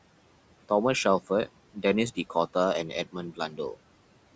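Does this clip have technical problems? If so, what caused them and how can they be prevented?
Yes. Noise suppressor artifacts run through the whole clip. The suppressor pulls down the background by about 18 dB wherever it judges only noise is present. It decides frame by frame and band by band, so the remaining room noise, about 19 dB below the speech, does not sit still. It dips in the gaps and comes back under the talking. A gentler suppression setting, or a quieter room so less suppression is needed, prevents this.

There is also speech cut by the noise suppressor, from 3.32 to 3.59 s. Here the suppressor mistook part of the speech for noise and turned it down with the background, by as much as about 15 dB. Only a short stretch within that window is affected, about 150 ms in total. Those sounds come out swallowed and faint rather than missing outright. Lowering the suppression strength, or speaking closer to the microphone so speech stands clearly above the noise, prevents this. 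The call microphone processing is working normally, with nothing above 8 kHz.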